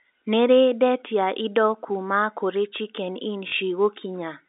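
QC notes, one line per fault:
3.48–3.52 s, packet loss with last packet repeated: about 40 ms of speech goes missing and the receiver fills the gap by replaying the last packet it received, which points to two 20 ms packets lost in a row. The two back-to-back copies give a brief buzzy, robotic stutter, heard over the narrow telephone band of the G.711 line.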